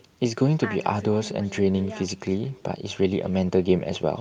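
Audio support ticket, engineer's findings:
Echo with no canceller, right through the clip. Every phrase trails a faint, thin copy around a fifth of a second behind, sitting about 23 dB under the speech. Far end's on a loudspeaker, their mic's picking up our audio, and nothing's cancelling it, so it rides back across the network round trip. Worth checking their echo cancellation.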